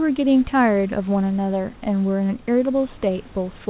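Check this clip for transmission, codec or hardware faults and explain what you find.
No transmission, codec or hardware faults can be heard: the speech comes through the call path intact, with the band ending at 4 kHz as expected for narrowband telephone coding such as G.711, and the room's background noise sitting about 29 dB below the speech.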